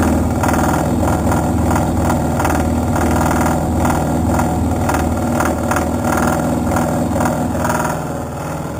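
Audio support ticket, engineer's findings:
Imaging from sample-and-hold upsampling, throughout: metallic fizz tracking signal level, images in the 4 to 8 kHz band at about -18 dB. Fits 8 kHz audio zero-order-held to 44.1 kHz, no interpolation filter.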